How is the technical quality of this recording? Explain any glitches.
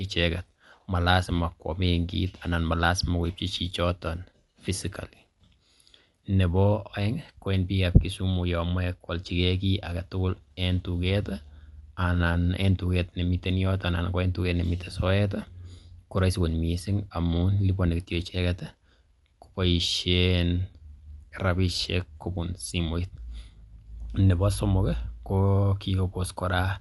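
The technical quality is limited by codec damage that runs through the whole speech recording. The sound is dull and clearly compressed. Nothing reaches above about 11.4 kHz. A rough, fluttering noise clings to the voiced tones. This is likely Dolby Digital compression at a low bitrate, which fits something near 64 kbps. At that rate the encoder narrows the band. Many frequency lines get no mantissa bits, and the decoder fills them with noise.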